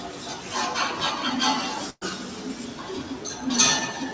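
From the start and running the whole way through, a noise suppressor built for speech is acting on this everyday sound. It treats sustained tones and ambience as noise, so level swings by about 5 dB as onsets pass and held parts and tails are pulled down, leaving a pumping, thinned texture. Unlike a compressor, it reacts to how steady a sound is rather than how loud, so quiet transients survive while loud steady beds still dip.

At 1.90 to 2.03 s comes a burst of packet loss. The receiver covers roughly 114 ms by stretching the last audio and fading it, ending in about 30 ms of silence, and then resumes with about 120 ms of the original missing. Unlike a plain dropout, the gap is papered over by a decaying smear of the preceding sound, not a hard cut, and the event then jumps ahead. The band stops at 8 kHz, which fits a wideband call codec such as G.722.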